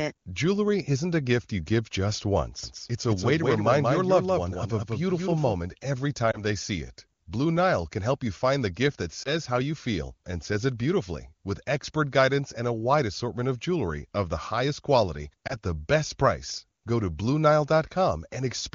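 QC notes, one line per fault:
2.63–5.53 s, doubled audio track: a second full-band copy of the speech runs about a fifth of a second behind, a few dB quieter, and starts and stops abruptly. It has no decay or room colour, unlike echo or reverb. The likely cause is a second, slower capture path.
6.31–6.41 s, 9.23–9.32 s, 15.47–15.55 s, lost AMR speech frames: each is a brief dip or warble where one 20 ms frame failed and the decoder reused the previous pitch and vocal tract settings at falling gain. Unlike a dropout, the gap is filled with smeared speech rather than silence, and the voice comes back weak or rough for a moment.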